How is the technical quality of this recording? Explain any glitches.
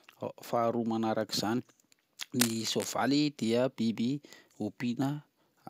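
The recording has one clear glitch: a burst of cable scratch noise from 2.39 to 2.88 s, lasting about half a second. It sounds like a rough scraping rustle laid over the speech and only a little quieter than it. The likely cause is a worn cable, connector or control being moved so that its contact resistance fluctuates rapidly. That injects dense, irregular noise. Unlike isolated digital clicks, the disturbance is a continuous, uneven texture that starts and stops with the movement.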